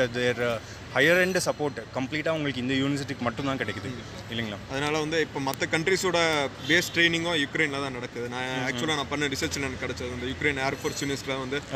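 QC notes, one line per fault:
0.78 to 11.10 s, word clock ticks: a regular series of short, sharp ticks, about fifteen in all, recurring roughly every 0.7 s. The receiving device is running on its own clock rather than locking to the incoming digital stream, and the two clocks drift apart by something like 30 ppm. Each time the drift amounts to a full sample, one sample is dropped or repeated, leaving a tiny discontinuity that is heard as a tick.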